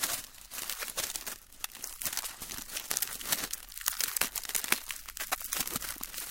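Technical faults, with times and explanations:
0.00–3.51 s, sample clock jitter: a grainy hiss rides on the sound, strongest on loud, bright passages, because the converter's clock wobbles by around two microseconds, so each sample is taken at a slightly wrong instant and steep waveform slopes turn that timing error into noise roughly 20 dB below the signal. Unlike a fixed noise floor or dither hiss, this roughness follows the signal's level and brightness and disappears when the sound falls silent.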